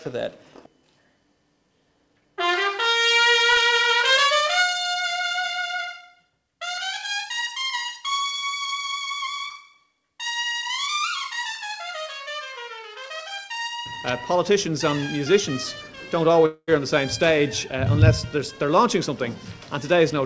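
From 16.46 to 16.71 s the sound smears into a fading buzz, then a brief silence before resuming with about 220 ms missing, likely a long network dropout.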